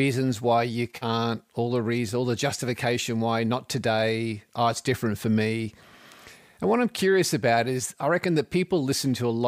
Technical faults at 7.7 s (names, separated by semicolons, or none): none